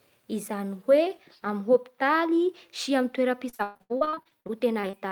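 From about 3.49 to 4.95 s the speech breaks up with repeated packet loss. Audio keeps going missing in quick succession, and each hole gets papered over by stretching the last bit of sound. The longest gap is about 120 ms, and roughly two-fifths of that stretch ends up as patched-in filler. It sounds choppy.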